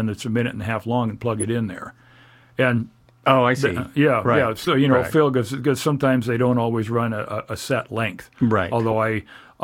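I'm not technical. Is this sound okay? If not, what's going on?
No. There are short chirps or bursts of noise at 1.33 to 1.45 s, 4.62 to 4.68 s and 8.90 to 8.93 s, the first the longest and loudest. Each is a corrupt frame decoded: damaged chunks of compressed speech got played anyway, putting sound at the wrong pitches.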